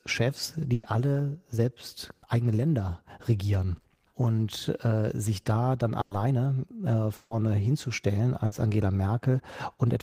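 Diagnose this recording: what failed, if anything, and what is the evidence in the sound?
Network stage, burst of packet loss, three times: 0.73 to 0.98 s, 6.01 to 6.14 s right after "äh sich da dann", and 8.46 to 8.55 s. Each time the last sound is stretched into a fading buzz or hiss for 60 to 100 ms, then the speech jumps ahead with about 60 ms gone.

Right after that second gap, from 6.18 to 6.36 s, there's a jitter buffer speed-up. The speech runs at about 117% with the pitch unchanged, so it sounds briefly hurried. The receiver is snipping out pitch-period slices, roughly 40 ms in total, to work off the backlog that built up around the loss.

At 7.15 to 7.36 s the sound is held and fades out over about 160 ms, then resumes with roughly 120 ms missing. That's longer than the other gaps, so a long network dropout is the likely cause, with the playout delay then shifting by around 40 ms.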